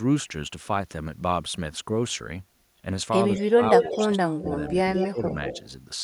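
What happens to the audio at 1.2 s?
Nothing goes wrong at 1.2 s; the speech carries on intact through that moment, with no dropout, click or distortion.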